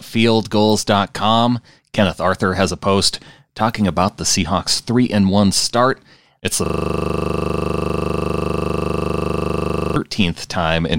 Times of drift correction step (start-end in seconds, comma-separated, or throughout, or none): none